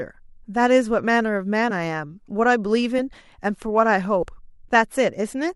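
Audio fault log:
1.70–1.74 s, 2.98 s and 4.22–4.27 s, compressed frames skipped: the speech lurches forward three times, losing roughly 20 ms, 30 ms and 70 ms. This fits whole 10 ms frames missing from the stream or rejected as damaged by the decoder, about two, three and seven of them. No gap of silence is left either, which is what separates this from a dropout.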